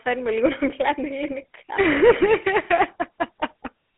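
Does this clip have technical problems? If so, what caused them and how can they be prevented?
Yes. The speech carries GSM full-rate codec damage from start to finish. The sound is confined to a phone band of about 250 Hz to 3.5 kHz, and nothing is present above 3.8 kHz. The codec rebuilds the voice from a vocal-tract model driven by evenly spaced pulses, and it keeps only a third of the excitation samples. That thinning causes the plainly audible rough texture, which fits the 13 kbps full-rate mode. To prevent it, record or transfer the speech over a wideband path instead of a GSM call.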